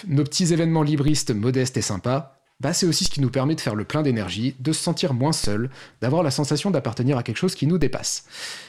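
Four DC steps occur in this speech, at 1.08, 3.06, 5.44 and 7.82 s. Each time, the waveform's zero line suddenly jumps. That offset then decays away slowly, as through a 2 Hz high-pass. Each step sounds as a low thump, while the speech continues unchanged.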